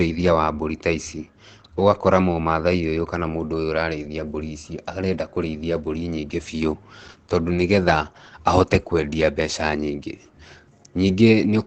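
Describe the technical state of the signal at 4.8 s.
At 4.8 s the speech is likely passing through heavy Opus compression at a low rate in its SILK speech mode, which fits roughly 12 kbps. This holds throughout the clip: nothing sounds above 8.8 kHz, so the speech comes out muffled, narrowed and hoarse.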